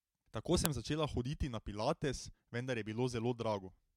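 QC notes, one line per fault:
0.66 s, file header played as audio: a single sharp, loud snap cuts into the speech at this point, unrelated to the level or shape of the surrounding signal. It points to a splice where a second WAV piece begins and its header was left in place. The few dozen bytes of header data are read as sample values, which jump abruptly away from the waveform and produce a brief broadband click before normal speech resumes.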